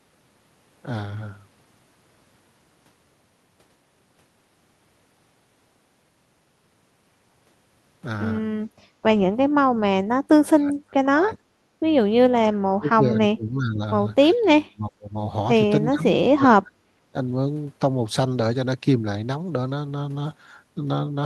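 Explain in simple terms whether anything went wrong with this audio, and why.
Speech suppressed in double talk: the speech drops away or cuts out at 10.48–11.39, 12.43–13.81, 14.34–14.41, 14.60–15.14, 15.90–16.06 and 16.26–17.15 s. An echo canceller likely turned it down while the other side was also talking.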